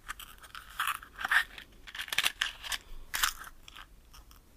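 From 1.86 to 2.36 s the sound steps down by about 6 dB and back, likely one channel dropping out; a fade would slope instead.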